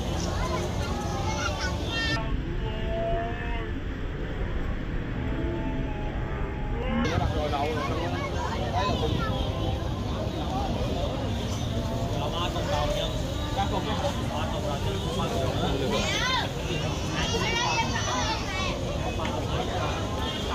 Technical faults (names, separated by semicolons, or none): stereo read as mono